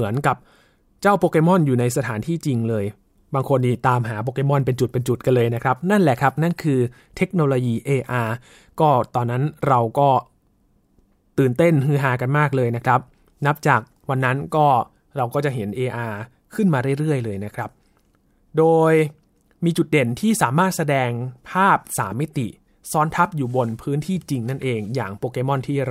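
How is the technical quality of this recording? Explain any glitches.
The technical quality of this recording holds up, with no glitches to explain.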